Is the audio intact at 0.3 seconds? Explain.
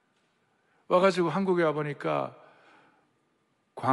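No. Lost LE Audio frames hit at 0.31 s, a gap lasting about 20 ms, which fits two dropped 10 ms frames. With no new data arriving, the LC3 decoder fills the hole by repeating the last good spectrum with its signs randomised. For that instant the sound becomes a brief noisy smear rather than a clean continuation. The dropout is too short to fade toward silence.

Underneath, the audio carries a breathy, grainy edge with noise-filled highs, plainly audible and likely caused by Bluetooth LC3 compression at around 48 kbps. At that rate the codec discards much of the upper spectrum in each 10 ms frame and substitutes shaped noise. This coarser texture is present at 0.3 s as well, so the moment is compromised both by the lost frames and by the codec's constant band-filling.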